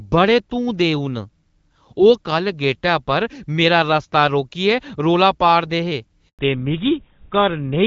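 A handover gap opens at 6.29 s in this speech recording: the voice dies away within a few tens of milliseconds and stays silent for 100 ms, until 6.39 s. That pattern is what happens when a call is passed from one network to another and no speech frames arrive during the switch, so whatever was said in that tenth of a second is simply gone. Before it, the HD Voice sound is clear, with only light coding damage, which fits AMR-WB at around 12.65 kbit/s. A fallback to narrowband follows from 6.39 s to the end of the clip. Nothing above 4 kHz survives, and the voice turns duller and rougher. The new link has dropped the call from the wideband codec to an older narrowband one, which sounds like GSM full rate at about 13 kbit/s, and that codec cannot carry the upper band at all.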